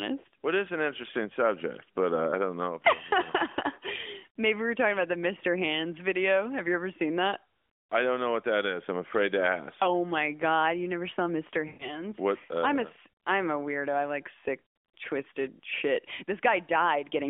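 Speech over a light-sounding AMR narrowband mobile line, with two bursts of lost AMR speech frames at 11.68–12.04 s and 14.66–14.76 s, where the decoder stretches the last good sound and fades it out.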